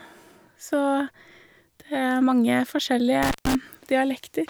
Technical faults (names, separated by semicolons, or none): intermittent contact